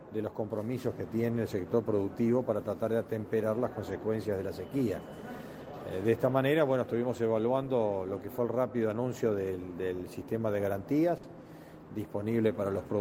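At 11.17 s the sound briefly smears into a held, fading tail before picking up again at 11.26 s with a small jump. This is a burst of packet loss: consecutive packets never arrived, so the receiver stretched the last sound for about 60 ms while lowering its level, and about 60 ms of audio is simply gone.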